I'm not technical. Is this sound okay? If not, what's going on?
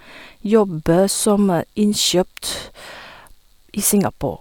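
Yes, this sound is okay. I can't hear any technical problem anywhere in this recording.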